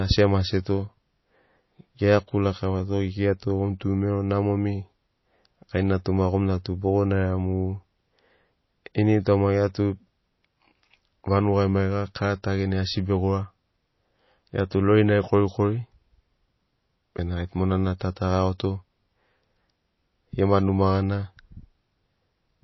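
Speech sounding watery and swirly throughout, with nothing above 5.8 kHz, likely from MP3 compression at a low bitrate that fits 24 kbps.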